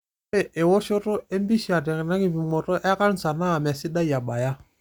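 No technical faults can be heard anywhere in the recording.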